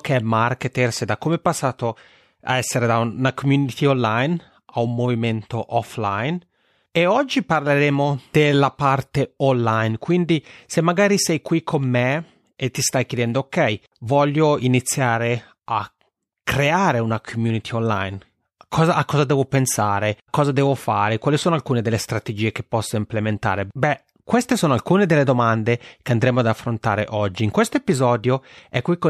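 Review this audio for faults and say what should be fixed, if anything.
Nothing should be fixed, since no faults turn up anywhere in the audio.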